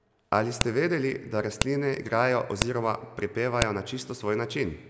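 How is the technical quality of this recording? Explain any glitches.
The recording has one recurring glitch: file header played as audio. Sharp, loud clicks land at 0.61, 1.62, 2.62 and 3.62 s. The first comes just before "vedeli da", the second just after it. One-second WAV pieces were joined with their headers kept. Those bytes play as a brief burst of noise.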